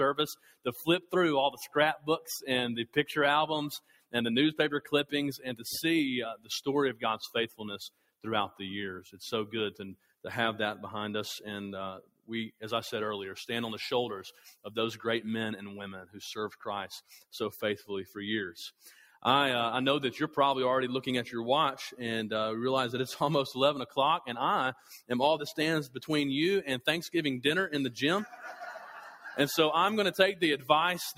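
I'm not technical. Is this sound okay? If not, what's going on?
No. Throughout, the sound keeps swelling and sinking slightly, as if breathing. A noise suppressor made for speech was left on, so it treats steady tones and fading tails as noise and keeps turning them down a little.

At about 0.34–1.13, 1.52–2.29, 3.77–4.14, 6.95–8.24, 9.96–10.13, 12.02–12.62, 18.79–19.18 and 24.74–25.10 seconds, the sound clearly dips or gets cut short. This is sound cut by the noise suppressor: the held parts drop away while sudden hits still come through.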